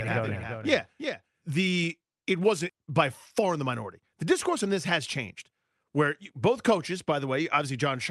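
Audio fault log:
0.00–1.84 s, doubled audio track: a second full-band copy of the speech sits roughly 400 ms behind, about 10 dB quieter, with no room colour. It's already running when the clip opens and cuts off abruptly, likely from a slower second capture path.
2.69–2.71 s, skip ahead: playback jumps forward with no gap at all, dropping about a second of speech. The two sides are butted straight together, which fits the jitter buffer discarding a backlog of audio to cut its delay.
2.79–5.36 s, jitter buffer speed-up: the speech runs at 107% speed with unchanged pitch, so it sounds a bit rushed. The buffer trimmed short pitch-period pieces over and over, removing around 200 ms in total to get back to its target delay.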